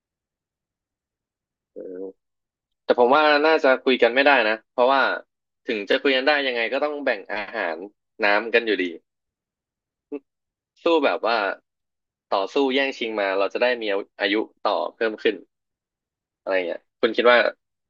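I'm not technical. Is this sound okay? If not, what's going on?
No. There are overlapping chunks: the speech is handled in 6-second pieces, and each piece starts slightly early, so about 23 ms is played twice, at 5.93 to 5.95 and 11.95 to 11.97 seconds. Unlike a dropout, nothing goes missing; a tiny stutter repeats.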